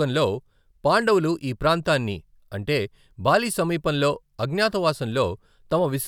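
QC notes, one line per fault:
No faults detected in this clip.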